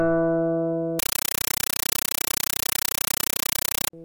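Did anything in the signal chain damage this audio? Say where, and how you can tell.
Yes. At the playback stage, a compressed stream was played as audio. From 0.99 s to 3.93 s the everyday sounds give way to very loud, chattering static. The chatter has a steady rhythm of 31.25 bursts per second. Each burst of hiss lasts about 8 ms and is followed by silence. That pattern fits an undecoded Dolby Digital stream on a digital link. Each frame's data was treated as ordinary samples, so it came out as noise with padding between frames.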